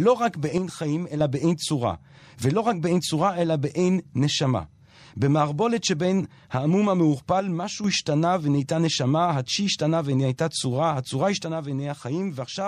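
One channel drops out three times: from 0.58 to 1.20 s, from 7.40 to 7.84 s, and from 11.43 s to the end. Each time the speech level falls abruptly by about 6 dB, and in the first two it recovers just as suddenly. The likely cause is one side of a stereo feed going silent before the mono sum, so material shared by both channels arrives at half strength, and anything carried only on the lost side vanishes.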